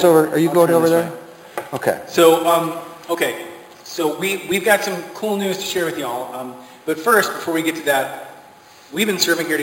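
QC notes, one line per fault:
Throughout: imaging from sample-and-hold upsampling. Audio at about 11 kHz was raised to 48 kHz by repeating samples with no smoothing filter, so mirrored copies fill 5.5 to 11 kHz, about 16 dB down. The result is a metallic fizz that tracks the level and moves against the pitch.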